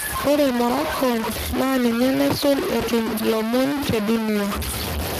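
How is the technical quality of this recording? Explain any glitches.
The technical quality is poor, with two faults running through the whole speech clip.

Low bit depth without dither is audible throughout. The speech is coarse and grainy, with distortion almost as loud as the voice. It likely comes from truncation to roughly three bits.

Speex codec damage is plainly audible throughout. Few bits describe the excitation, so the speech sounds hoarse and noisy. This fits Speex at around 22 kbps. Nothing sounds above 15.3 kHz.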